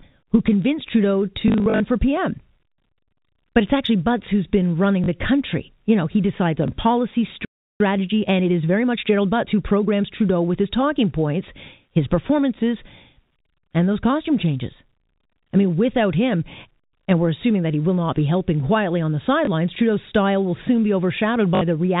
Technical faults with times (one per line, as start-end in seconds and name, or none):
1.48-1.80 packet loss with last packet repeated
5.04-5.08 packet loss with last packet repeated
6.68-6.70 packet loss with last packet repeated
7.45-7.80 playback stall
7.80-10.12 time-compressed catch-up
19.45 packet loss with last packet repeated
21.55-21.61 packet loss with last packet repeated